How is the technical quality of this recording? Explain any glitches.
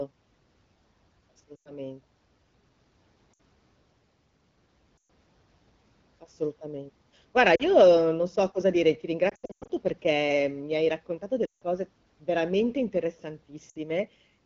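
The recording is marred by repeated lost AMR speech frames, heard as brief warbles and fades at 1.55–1.73, 3.33–3.40, 4.97–5.08 and 7.55–7.64 s (just before "non so cosa dire"). More follow at 9.29–9.71 s, between "so cosa dire ti" and "perché mi hai raccontato", then at 11.45–11.62 s (after "perché mi hai raccontato") and 13.69–13.77 s. The wideband speech between them sounds clear.

When radio errors corrupt a frame, the decoder reuses the last good pitch and vocal-tract settings at falling gain. The gaps run 40 to 160 ms, and the 9.3 s stretch is scattered over 400 ms. Short gaps give a dip or warble. Longer ones drop to near silence within two frames, and the voice returns weak or rough. A plain dropout would cut to silence instead of this fading, concealed tail.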